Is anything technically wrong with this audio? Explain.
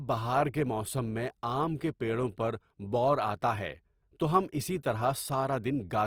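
Yes. Throughout the speech there is plainly audible damage whose character points to likely Opus compression at a low rate, which fits roughly 24 kbps in its CELT music mode. The encoder preserves each band's energy but, short of bits, fills band detail by folding lower bands or substituting noise, so there are few holes or swirls; instead the voice turns grainy, rough and noisy. Bandwidth stays full, with content reaching 20.2 kHz.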